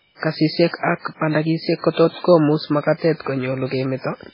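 Throughout, the speech sounds watery and swirly, with nothing above 5.3 kHz, likely from heavy MP3 compression, which fits a bitrate around 16 kbps.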